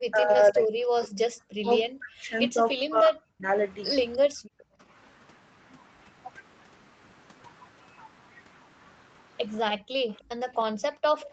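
From 0.07 to 3.5 s the speech dips by as much as roughly 40 dB, adding up to about a second and a half of lost sound, likely speech suppressed in double talk, with the echo canceller ducking the talker while the far side spoke. Inside that stretch, from 0.29 to 0.52 s, there's a faint delayed copy of the voice, about 35 dB down and trailing by roughly 0.3 s, likely an echo leak from a loudspeaker the canceller didn't fully clean up. The same leak turns up again briefly from 4.13 to 4.18 s, a bit louder at about 30 dB down. Then from 4.28 to 4.79 s the room sound drops out by about 40 dB for about half a second: that's background gated by the echo canceller, clamping the mic while the loudspeaker played. It happens again from 9.74 to 11.17 s, about 0.7 s of dropout in total. The echo leak comes back at 10.17 to 10.22 s, about 35 dB down, and at 11.17 to 11.31 s, loudest of the lot at about 25 dB below the speech.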